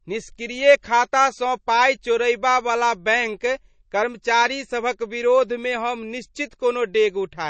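Throughout, the speech sounds watery and swirly with nothing above 8.3 kHz, likely from MP3 compression at a low bitrate, around 32 kbps.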